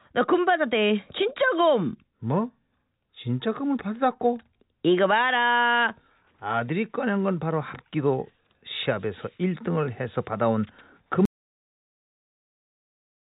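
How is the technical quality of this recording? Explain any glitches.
The recording has one clear fault: an audio dropout to silence at the end. It came through a call path, and nothing is heard above 4 kHz, which fits a narrowband telephone codec such as G.711 mu-law.

The dropout starts at 11.25 s and lasts to the end, about 2.1 s. The speech cuts off abruptly. What follows is silence, with no room tone or hiss. That points to lost input, such as a disconnected device, a dropped link or an accidental mute. The likely result is that the recorder kept writing silence. Whatever was said in that span is gone.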